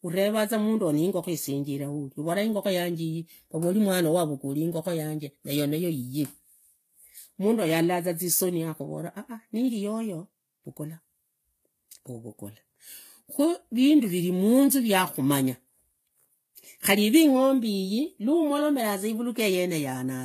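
From start to finish the speech carries layered coding damage, likely from transcoding between lossy codecs: a low-rate HE-AAC encode, consistent with something near 24 kbit/s, followed by a Vorbis pass at a moderate rate. Nothing reaches above about 14.9 kHz. The second encoder spends its bits re-coding the first one's artefacts while adding its own, so both sets of artefacts sit together in the speech.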